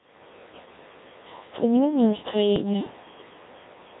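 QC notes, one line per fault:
Throughout: Codec 2 vocoder. The speech has the robotic, buzzy quality of a very low-rate digital-radio vocoder, consistent with a rate around 1.3 kbit/s, and the damage is heavy. Only pitch, voicing, level and a coarse spectral envelope survive; the decoder rebuilds the sound from sine waves, so the original waveform and natural texture are gone. The band is confined to roughly 250 Hz to 3.7 kHz, leaving it thin and lacking depth.
2.56–2.73 s: bit errors on digital voice radio. For about 0.17 s the synthetic speech lurches in pitch, loudness and tone colour, breaking into warbling, bleepy gibberish. At this bitrate every bit steers the pitch, energy, voicing or spectrum of an entire frame, so corrupted bits at a rate of roughly one in twenty throw whole frames off course. The span matches about four consecutive frames being garbled before decoding recovers.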